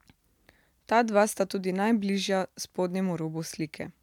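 Nothing in the speech here points to a technical fault; it runs along without any glitches worth noting.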